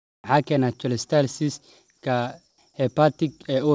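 From 2.50 to 2.58 s, about 80 ms, the background between speech turns into a steady, featureless hiss, about 5 dB quieter. This is likely comfort noise in place of the background. The sender paused transmission during silence, and the receiver filled the gap with synthetic noise.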